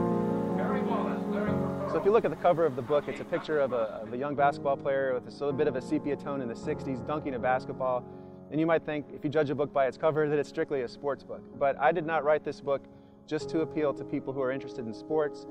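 Small timing hiccups recur at uneven intervals across the whole clip. This is clock drift between sender and receiver: the sender's clock runs roughly 4 percent fast, so the receiver's jitter buffer keeps filling and must shed audio to avoid overflowing.

From 0.55 s to 15.38 s the audio carries repeated timing corrections, heard as an unsteady pace with occasional hiccups. The receiver keeps cutting short pieces out, all in the same direction and unevenly spaced, so playback moves at 105 percent to keep up with the faster sender.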